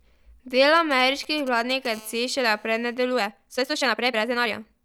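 From 0.76 to 1.87 s, GSM signalling bursts from a nearby 2G phone break in as galloping dit-dit-dit groups of short buzzes, roughly 20 dB below the speech. The audio circuitry rectifies the radio pulses. On a spectrogram they appear as clustered vertical stripes with a comb of harmonics spaced at 217 Hz.

From 1.94 to 2.95 s a steady GSM phone buzz follows, as the phone settles into a call and transmits continuously at 217 bursts per second. It is a hard, raspy tone about 28 dB below the speech, drawn on a spectrogram as unbroken horizontal lines at 217 Hz and its many multiples, unrelated to the voice.

From 3.11 s to the end, the speech abruptly runs 1.72 times faster with its pitch unchanged, sounding rushed. This is likely a time-stretched section, squeezed by dropping short slices. The waveform shows compressed syllables with small discontinuities at the splice points.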